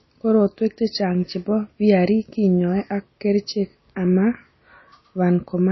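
From start to finish the speech carries plainly audible MP3 compression. The quieter detail has that watery, swirly quality as weak frequency lines drop in and out from one frame to the next. S sounds pick up a metallic chirp and consonant attacks get smeared. It's likely an encode at a low bitrate, around 24 kbps.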